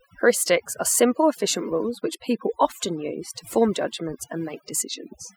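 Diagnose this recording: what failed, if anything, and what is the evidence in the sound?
Overdone noise removal failed at the processing stage, and it lasts the whole clip. Gaps between phrases fall to near silence with twinkling specks. The suppressor pulled bands near its noise estimate far down, taking quiet speech detail with them.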